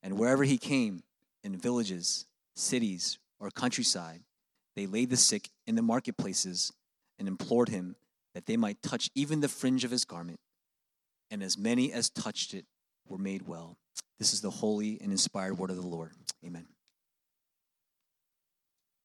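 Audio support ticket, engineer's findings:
No fault found on listening: level, continuity and bandwidth hold steady throughout, with no dropouts, clipping or timing irregularities to trace to any component.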